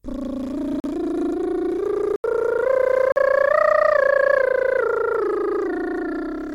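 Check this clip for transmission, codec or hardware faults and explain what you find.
The music contains one kind of fault, repeated three times. Blocks of digital silence occur at 0.80 to 0.84 s (40 ms), 2.16 to 2.24 s (80 ms) and 3.12 to 3.16 s (40 ms). In each, the sound cuts out and back with no fade, and each block is heard as a brief hole in the music.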